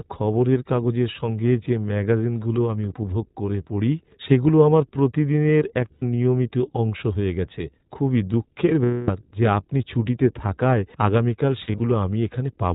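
The whole clip runs through the iLBC codec. It's narrowband, so nothing above 4 kHz survives, and the speech comes out clear but a bit rough and synthetic, which fits iLBC's 15.2 kbps mode with 20 ms frames.

Then there are lost iLBC frames. At 5.92 to 6.04 s, about 100 ms goes missing, and the decoder bridges it by repeating the last pitch cycle with noise, so you hear a brief buzzy held vowel. From 8.84 to 9.10 s, a longer 240 ms gap gives the same held, breathy tone, fading as it goes. From 11.64 to 11.80 s, the losses are scattered short dropouts, each only around 40 ms at most. Each time the voice snaps back almost immediately, since iLBC frames stand alone.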